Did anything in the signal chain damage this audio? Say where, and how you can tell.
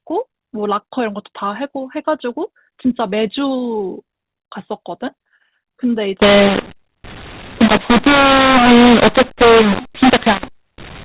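Yes, at the codec stage. From 6.22 s to the end, the speech turns harsh and gritty, and the pauses fill with hiss. This is a mu-law and A-law mix-up: audio encoded as mu-law is being decoded as A-law, so each 8-bit code maps to the wrong level. On the waveform, the envelope looks jagged and the silent gaps no longer sit at zero. On the spectrogram, broadband noise fills the band up to the 4 kHz telephone ceiling, which fits 8 kHz G.711 sampling.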